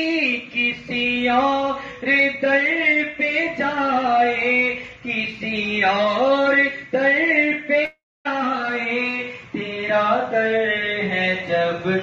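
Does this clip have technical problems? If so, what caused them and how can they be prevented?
Yes. A long network dropout is the likely cause: from 7.85 to 8.27 s no packets reached the receiver, and about 0.4 s of audio was never played. Concealment stretched the last sound briefly into a fading buzz or hiss, which then gave way to about 0.26 s of silence before the audio resumed further on with the lost part missing. A steadier connection, plus a larger jitter buffer and forward error correction, would help prevent this.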